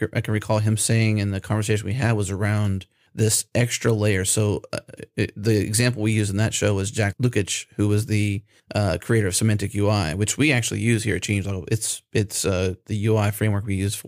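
Nothing goes wrong anywhere in this stretch of speech, so there's no technical fault to point to.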